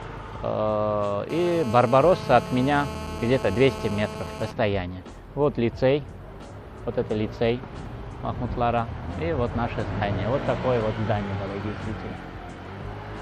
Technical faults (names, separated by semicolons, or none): GSM phone buzz